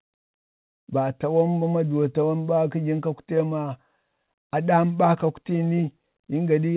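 Speech over ordinary telephone coding; nothing technically wrong.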